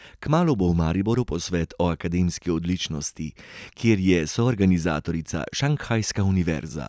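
Nothing in this speech recording stands out as a fault; it simply runs along without anything going wrong that a listener would pick up on.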